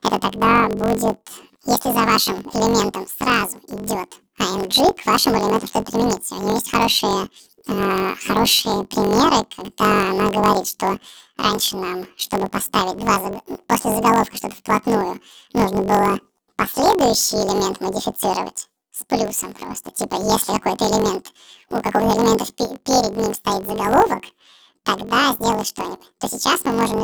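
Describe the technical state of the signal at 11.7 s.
At 11.7 s, as throughout, planar audio is read as interleaved. Each 21.77 ms block plays twice at double speed, lifting the speech an octave with a 45.9 Hz buzz, visible as stripes on a spectrogram.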